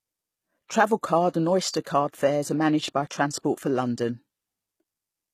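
Throughout, the treble sounds synthetic and gritty with plainly audible codec damage, likely HE-AAC compression with band replication, which fits a low bitrate around 20 kbps. Pre-echo appears at 0.68–0.70 s and 1.84–1.86 s, just before "fares are managed by": block-spread quantisation noise puts a brief hiss ahead of each attack, softening it.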